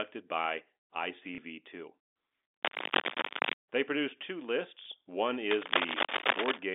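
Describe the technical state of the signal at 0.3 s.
At 0.3 s the signal is intact, carrying the narrow band of an ordinary G.711 telephone line with nothing disturbing it.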